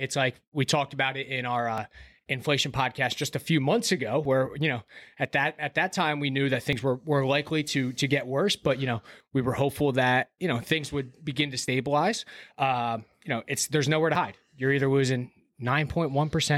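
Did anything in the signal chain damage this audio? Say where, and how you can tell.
Yes. Audio missing between chunks, likely at the driver or buffer stage: skips of about 30 ms at 1.78, 4.25, 6.73, 9.20, 11.68 and 14.15 s, about 2.5 s apart, with the two sides joined without silence. That strict spacing, rather than scattered or silence-filled gaps, separates it from network packet loss.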